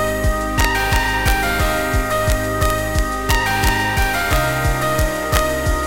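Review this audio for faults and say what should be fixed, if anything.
Integer overflow occurs across the whole clip: the gain runs about 1 dB past full scale, and the few peaks that exceed the integer limit, a tiny fraction of samples, wrap to the opposite sign, producing sharp cracks on the loudest moments. Fix it by using saturating arithmetic or a limiter before conversion.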